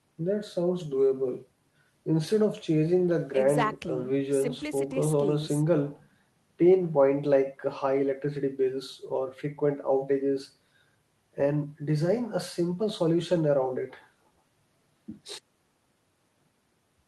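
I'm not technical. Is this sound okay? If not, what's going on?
Yes, no faults here.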